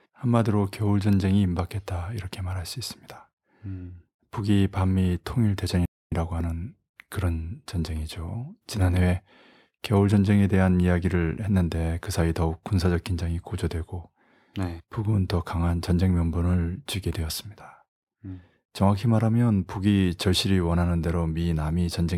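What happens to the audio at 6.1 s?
At 6.1 s the speech is just coming back from a playback stall. From 5.85 s the output drops to silence mid-flow, and the sound resumes at 6.12 s after a gap of about 0.26 s. It is an abrupt hole rather than a fade. The likely cause is the player running short of data, or its audio thread being briefly blocked, so nothing reached the output until it recovered and carried on.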